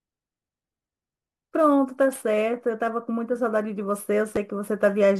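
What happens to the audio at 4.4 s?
At 4.36 s, chunks out of order: one 5.33 ms chunk plays a chunk late, causing a brief jumbled moment with nothing lost, unlike a dropout's gap.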